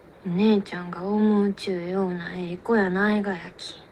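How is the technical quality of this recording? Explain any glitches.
The recording has one glitch, a call bitrate drop, from 2.14 s to 3.69 s. The audio turns coarser and duller there. It stays at its worst for about 1.48 s before recovering. The call's bandwidth estimate fell, so the encoder had to spend far fewer bits. It codes more roughly and trims the high frequencies. The result sounds rough and muffled. The change points to a fall from about 32 kbps to about 17 kbps.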